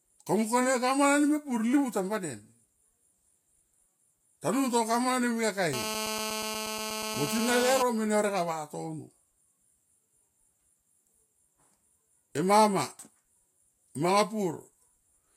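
GSM phone buzz from 5.73 to 7.82 s: a nearby handset's call bursts, rectified by the audio circuitry, give a steady, raspy 217 Hz buzz about 6 dB below the speech.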